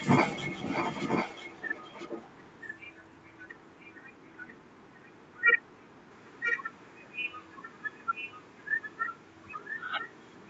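From start to finish, a faint second copy of the speech trails about 0.99 s behind the original, around 15 dB quieter. This is likely an echo leak: a loudspeaker's sound reached a microphone, and the echo canceller let some through. The band-limited call audio stops near 8 kHz.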